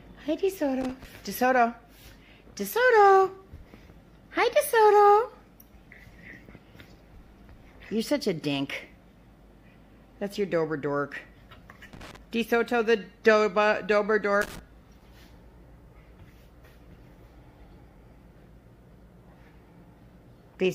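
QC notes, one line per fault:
0.81–1.05 s, 11.93–12.17 s, 14.41–14.59 s: loose connector crackle. Three short bursts of irregular scratching and crackle, each roughly a quarter of a second or less. A worn or dirty contact in the signal path is intermittently opening and closing as it shifts. This chops the audio into ragged fragments, and each make or break of any DC present on the line adds a pop. The result is a gritty, uneven crackle over the sound.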